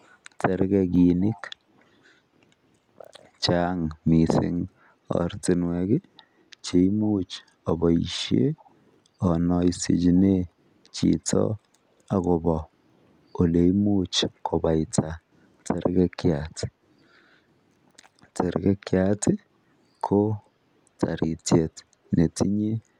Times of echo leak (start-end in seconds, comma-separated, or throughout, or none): 0.00-0.08, 1.20-1.41, 8.58-8.71